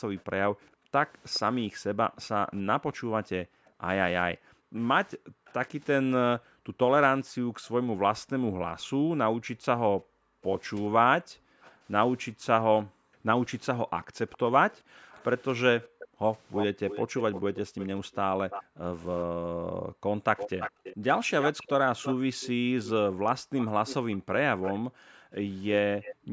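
From 0.17 to 2.6 s, a faint delayed copy of the speech trails it by 416 ms, about 25 dB below the direct sound. This is an echo leak, likely from a far-end loudspeaker whose echo canceller let residual microphone pickup return down the line. Short scraps of the same echo recur at 5.46–5.53 s, about 35 dB down, and at 11.62–11.72 s, about 30 dB down.

Between 0.71 and 16.23 s, the room background is gated by the echo canceller. The canceller clamps the microphone while its loudspeaker plays, so the ambience dips by up to about 40 dB, for roughly seven seconds in total, and recovers between dips.

From 14.32 to 18.64 s, the echo leak becomes much stronger, at about 10 dB below the speech with a shorter 333 ms delay. It returns at that level from 20.37 s to the end.

Background gating recurs from 18.05 to 21.06 s and from 23.09 s to the end. Each stretch contains roughly a second and a half of dropouts reaching about 40 dB.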